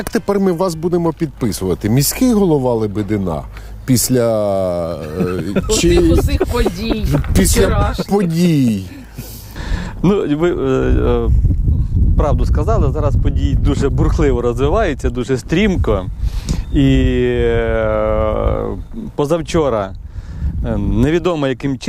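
From start to finish, the audio carries a resampler restarted on every block: each 10 ms block was converted from 44.1 kHz to 48 kHz in isolation, so every block edge carries a small error. With blocks this short, the ticks fuse into a 100 Hz buzz riding on the signal.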